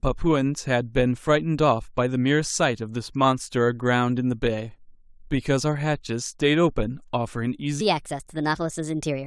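A speech recording whose final stretch, from 7.81 s to the end at 9.26 s, is a section at the wrong speed, likely from playback against a mismatched clock. It runs 1.32 times too fast, so the speech turns hurried and rises about five semitones in pitch.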